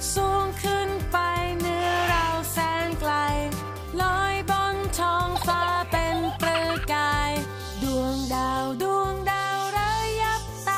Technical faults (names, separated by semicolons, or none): none